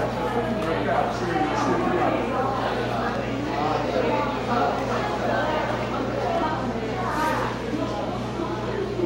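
No technical faults are audible anywhere in this recording of sounds.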